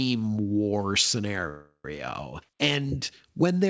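Speech clip with a call audio freeze from 1.49 to 1.85 s. The last sound is stretched into a fading buzz or hiss, then about 80 ms of silence, and the speech resumes with nothing lost. The likely cause is delayed packets draining the jitter buffer. Nothing is heard above 8 kHz, consistent with a 64 kbps G.722 call path.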